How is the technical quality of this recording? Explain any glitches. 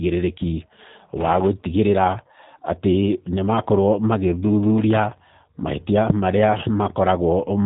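The quality is limited by low-bitrate telephone coding that runs through the whole recording. From start to finish the speech carries the character of a G.729 codec, and the audible damage points to an 8 kbit/s encoding. Instead of storing the waveform, the codec rebuilds each 10 ms frame from a vocal tract filter, a pitch predictor and a handful of pulses. That rebuilding gives the speech a rough, slightly synthetic buzz, though it stays intelligible. On a spectrogram, energy stops sharply at about 3.8 kHz, leaving an empty band above. The harmonics look smeared and blocky rather than smooth. The waveform looks simplified, with less fine detail.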